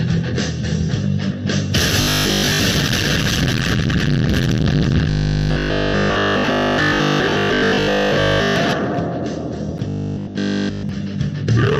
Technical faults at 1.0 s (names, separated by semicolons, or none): none